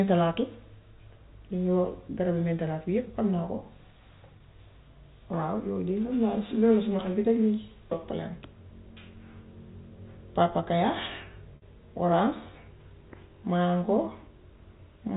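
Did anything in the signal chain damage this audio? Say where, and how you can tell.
Yes. The network stage dropped packets twice, and the receiver's concealment repeated the last pitch period of the speech to cover each gap: packet loss with pitch repetition. At 4.38 to 4.40 s a 20 ms hole comes out as a briefly held, buzzy tone. At 11.56 to 11.62 s the 60 ms loss is long enough that the repeated period fades out before speech returns through a short cross-fade. The G.711 telephone band around these gaps sounds as expected.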